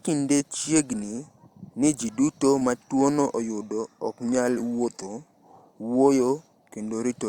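Short concealed packet loss occurs twice, at 0.38 to 0.41 s and at 2.59 to 2.62 s. Each time about 20 ms of the speech arrived too late to decode, so the receiver extended the preceding sound to cover the hole and then blended back in, leaving a brief smear.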